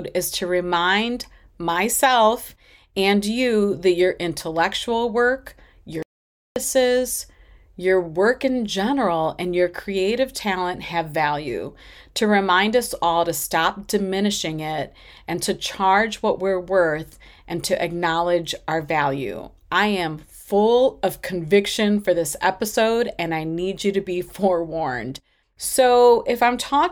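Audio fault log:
6.03–6.56 s, playback stall: right after "that your intellectual work" the speech halts mid-flow and the output falls to dead silence for about 0.53 s, then picks up again. The likely cause is the player briefly running short of buffered data or having its thread held up. The delivery simply freezes, then continues.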